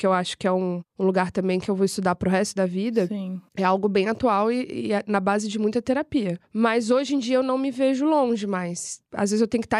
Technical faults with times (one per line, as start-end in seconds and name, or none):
none